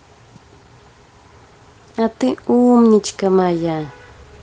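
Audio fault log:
No faults heard anywhere in this speech recording.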